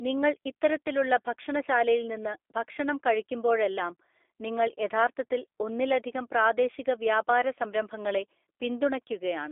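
Speech runs the whole way through with a narrow, boxy telephone tone, band-limited to roughly 300 Hz to 3.5 kHz, and a plainly audible rough, slightly synthetic buzz on every syllable. That texture is the signature of the G.729 codec, consistent with an 8 kbit/s G.729A stream. Instead of carrying the waveform, the codec rebuilds each 10 ms frame from a vocal-tract filter, a pitch predictor and a few sparse pulses, which leaves the voicing grainy and artificial.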